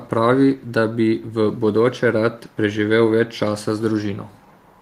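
From 0.58 to 0.72 s, a very faint echo leak: speech returns 378 ms late, likely past a failing echo canceller, showing as a weak spectrogram ghost.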